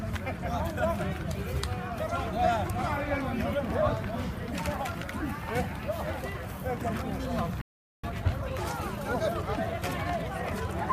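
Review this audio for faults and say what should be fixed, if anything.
Playback stall, 7.61 to 8.04 s: the player likely ran out of buffered data or had its output thread blocked, so the sound stops abruptly mid-flow and goes silent for about 0.42 s before resuming from where it left off.

Time-compressed catch-up, 8.04 to 10.78 s: to work off the backlog left by the stall, the player removes and cross-fades small slices of audio, running at 1.15 times normal speed. The sound is audibly hurried but keeps its normal pitch.

A larger playback buffer, and an audio thread kept free of blocking work, would prevent the stall and so remove the need for the catch-up.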